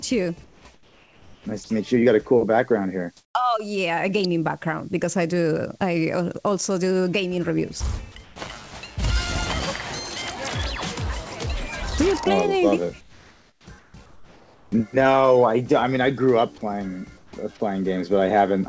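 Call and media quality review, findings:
Background turns flat and featureless, about 4 to 7 dB quieter (level unchanged at 8.24 s), at 0.44–0.65, 0.74–1.46, 8.24–8.36, 13.01–13.67, 13.79–13.94, 14.06–14.72 and 17.18–17.33 s. Comfort noise in place of the background, likely from discontinuous transmission.

Sound cut and replaced by steady noise at 1.64–1.70 s, about 30 ms of it lost. Sound dropped by the voice detector, likely misjudged as background before comfort noise was inserted. The call path's cutoff at 8 kHz fits a 64 kbps G.722 codec.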